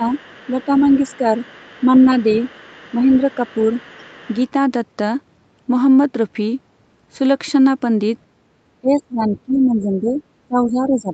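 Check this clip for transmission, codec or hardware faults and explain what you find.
Two kinds of fault are audible, both tied to echo cancellation.

Speech suppressed in double talk appears at 0.0–0.11 s, 0.51–1.25 s, 1.85–2.26 s, 2.91–3.65 s and from 8.81 s to the end. The level dips by around 5 to 10 dB early on and roughly 20 dB in the final stretch. The likely cause is an echo canceller that cannot separate the local talker from loudspeaker echo and attenuates both.

The other side's voice leaks through faintly from 0.13 to 4.44 s and in a short scrap at 10.17–10.22 s, sitting roughly 30 dB below the main speech. This is likely residual loudspeaker echo that the canceller failed to remove from the microphone signal. The same canceller is likely struggling with both problems here.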